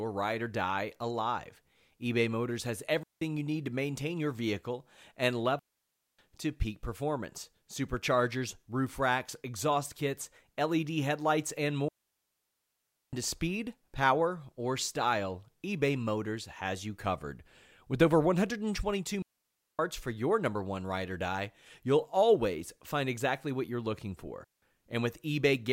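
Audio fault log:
3.03–3.22 s, 5.59–6.19 s, 11.88–13.13 s, 19.22–19.79 s, 24.44–24.62 s, digital wireless dropouts: the wireless link loses too much data, so the receiver mutes with a very short fade, leaving clean holes of near silence in the speech, 0.18 to 1.24 s long, with no noise burst on either side.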